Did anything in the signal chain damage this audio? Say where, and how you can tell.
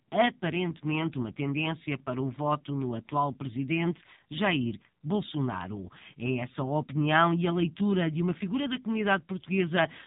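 Yes. The damage happens at the codec stage and runs through the whole speech clip: it has been through the AMR narrowband mobile codec, and the heaviness of the artefacts points to one of the lower AMR-NB modes, around 5.9 kbps. Nothing above 4 kHz survives, so the voice is dull and boxy, and it has a buzzy, synthetic edge. That comes from the codec rebuilding speech from a vocal-tract model driven by only a few pulses in each 5 ms.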